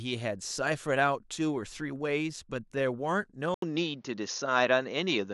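A speech clip where, at 3.54 s, there's an 80 ms gap and then the sound goes duller through to the end. Nothing above 6.8 kHz, a level jump of around 5 dB, and a new hiss about 45 dB down. That's likely an input switched to a poorer device mid-recording.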